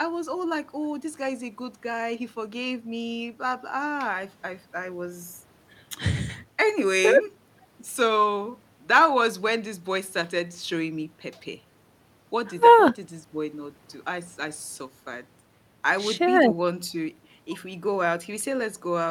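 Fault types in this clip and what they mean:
Listening through this speech recording, nothing stood out as a technical fault.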